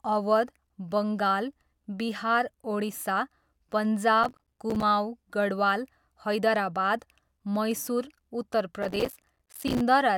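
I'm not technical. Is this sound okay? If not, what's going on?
No. There is processor overload crackle at 4.24 to 4.83 s and 8.83 to 9.81 s. The computer fell behind, leaving dozens of tiny silent gaps that sound like gritty crackling.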